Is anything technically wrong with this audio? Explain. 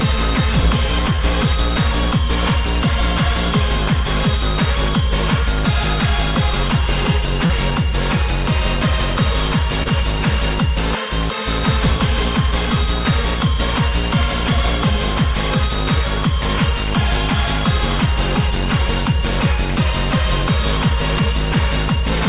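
Yes. Short concealed packet loss occurs at 1.16–1.20 s, 7.46–7.51 s and 9.83–9.88 s: missing audio, about 20, 40 and 20 ms, was replaced by extending the preceding sound, then blended back. Unlike a dropout, nothing goes silent; you hear a brief smear. Nothing above 4 kHz, consistent with a narrowband call codec such as G.711.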